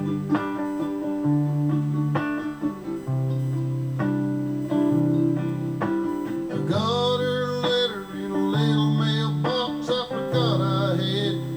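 A steady USB whine runs under the sound from start to finish, a fixed-pitch tone based on 1 kHz with its strongest component at the 2 kHz harmonic, sitting roughly 35 dB below the signal. The 1 kHz spacing matches the 1 ms frame rate of a USB bus: the interface's current draw pulses at that rate, and the ripple gets into the audio path through shared power or ground, adding a constant whine.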